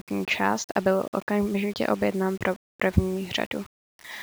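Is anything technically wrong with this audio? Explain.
Yes. Throughout the clip, the speech has low bit depth without dither. The quietest parts break into grainy, signal-following distortion, likely from rounding to very few bits, about 7, leaving error roughly 25 dB below the speech. A waveform would show staircase steps, and a spectrogram would show speckled noise that rises and falls with the voice rather than an even floor.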